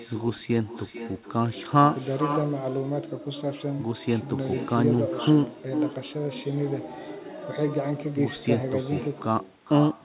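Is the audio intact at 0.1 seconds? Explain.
No. At 0.1 s, as throughout the clip, the far end is playing the call through a loudspeaker, and its microphone picks that sound up and sends it back with no echo canceller to remove it. The returned copy arrives roughly 0.4 s later, at about 10 dB below the speech, so every phrase is followed by a quieter, thinner shadow of itself. That copy is also narrowband, with nothing above 4 kHz.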